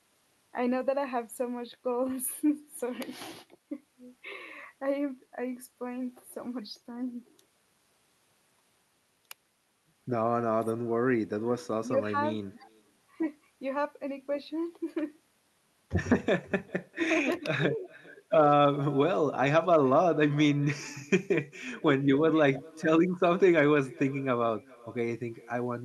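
Throughout this speech recording, carried over a call codec whose top end stops near 12 kHz, there is echo with no canceller: the far end's loudspeaker output leaks into its microphone and returns uncorrected, so every phrase is followed roughly four tenths of a second later by a faint, thin copy about 25 dB down. Unlike room reverberation, which smears continuously, this is a distinct delayed repeat.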